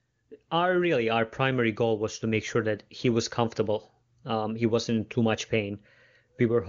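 Speech with no technical faults to be heard.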